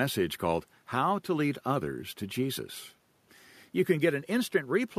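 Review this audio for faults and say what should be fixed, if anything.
Nothing here needs fixing; no faults were found.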